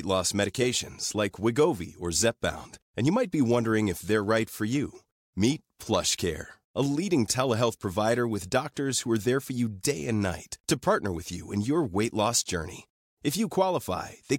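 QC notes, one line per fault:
No technical faults were heard in this speech recording, with the signal holding steady and intact from its first moment to its last.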